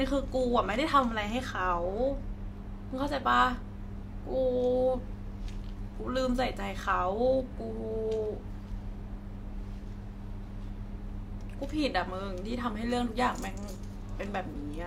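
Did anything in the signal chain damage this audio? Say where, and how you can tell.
No, nothing along the chain from capture to playback has left an audible mark on this speech recording. Listening closely for damage at any stage turns up no sign of it.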